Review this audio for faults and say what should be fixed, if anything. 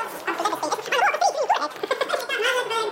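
The whole clip shows a wrong sample rate fault: everything runs twice as fast and sits a full octave (12 semitones) high. That fits material captured near 22 kHz being played at 44.1 kHz without conversion. Unlike a pitch shift or time-stretch, speed and pitch move together by the same ratio. Prevent it by reading the file's true rate and resampling to the playback rate.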